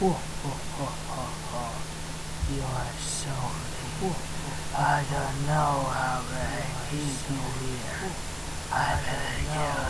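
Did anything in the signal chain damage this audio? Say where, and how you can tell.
No, nothing along the chain seems to have left a mark on these everyday sounds; there's no point in the clip where a stage gives itself away.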